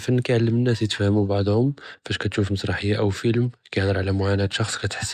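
Nothing technically wrong turns up anywhere in this short speech recording, so there's no fault to point to, no time to mark and no cause to explain.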